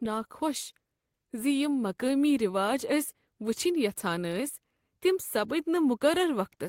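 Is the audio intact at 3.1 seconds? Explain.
Yes, at 3.1 seconds the speech plays through intact, with no dropout, click or other technical fault at that moment.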